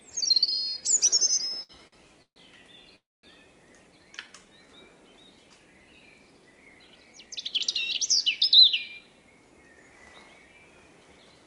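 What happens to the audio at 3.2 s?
Right around there you're in a call audio freeze, running from about 2.96 to 3.26 s. The last bit of sound gets stretched into a short fading buzz, then drops to near silence for roughly 0.22 s. Packets likely stalled in transit and the jitter buffer ran dry, so the receiver improvised. When the audio resumes it picks up where it left off, nothing's lost, but everything after sits about 273 ms later.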